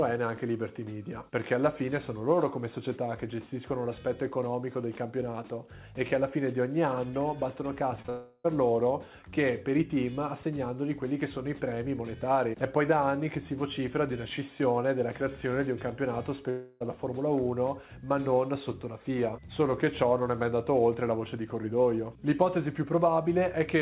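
The audio comes through a narrow call path with nothing above 4 kHz, which fits G.711 A-law. Short concealed packet loss hits at 8.02 to 8.06 s and again at 8.06 to 8.10 s. Each gap is about 20 ms and is patched over, so it is heard as a brief smear. A long network dropout is the likely cause of two longer holes, at 8.10 to 8.46 s and 16.50 to 16.82 s. In each, the last sound is stretched into a fading buzz or hiss. The audio then resumes with about 0.34 s and 0.30 s lost.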